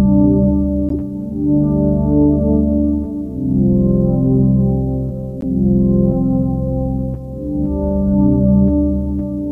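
Everyday sound with two corrupt frames decoded: short bursts at 0.89–0.91 s and 5.41–5.44 s, fairly loud near -10 dBFS, from damaged compressed frames misplacing energy across frequencies.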